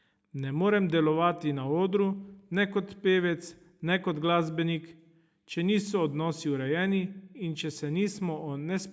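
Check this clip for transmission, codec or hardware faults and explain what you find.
On listening, nothing stood out in this speech clip; the call microphone processing can be heard trimming the lowest bass and leaving nothing above 8 kHz, as it normally would.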